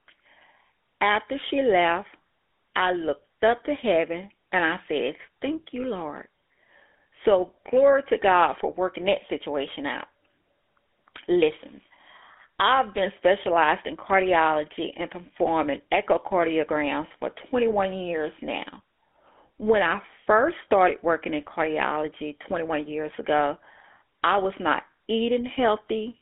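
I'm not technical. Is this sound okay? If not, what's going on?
No. The speech has passed through the GSM full-rate codec, an old mobile phone coding method. It rebuilds the voice from a simple throat model and a regular pulse pattern. That gives a buzzy, gravelly roughness the whole way through. Only sound between about 250 Hz and 3.5 kHz survives.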